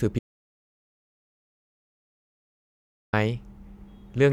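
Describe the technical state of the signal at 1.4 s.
Audio dropout to silence covers 1.4 s, sitting inside a gap that runs from 0.19 s to 3.13 s. The speech cuts off abruptly just after the start and resumes mid-flow near 3.13 s, leaving about 2.94 s of silence with no room tone at all. The likely cause is a lost input, such as a disconnected device, a failed link or a mute, while recording carried on writing silence, so whatever was spoken during that span is gone.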